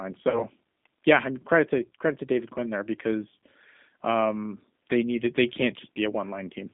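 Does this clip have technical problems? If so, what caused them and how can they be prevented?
Yes. Throughout, the speech sounds rough, slightly synthetic and boxy, confined to roughly 200 Hz to 3.6 kHz, which fits the G.729 codec at 8 kbit/s, rebuilding each voice frame from a filter and sparse pulses. Using a wideband codec such as G.722 or Opus prevents this.

From 0.30 to 0.45 s, just before "yeah I am credit", the sound smears into a fading buzzy tone or coloured noise and stays weak or distorted afterwards. This is VoIP packet loss concealed by the speech codec: about 40 ms went missing, which fits two lost packets, and the decoder extrapolated and faded the last frame. A larger jitter buffer and forward error correction prevent it.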